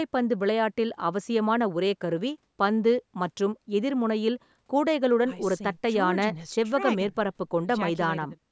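No technical faults can be heard in the speech, which carries the normal signature of a call's microphone processing: the lowest bass is trimmed by its high-pass filter and nothing sits above 8 kHz.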